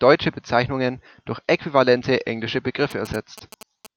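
From 2.91 to 3.87 s, after "durch äquivalente englische", GSM signalling bursts from a nearby 2G phone are rectified into a galloping dit-dit-dit of short 217 Hz buzzes about 20 dB down.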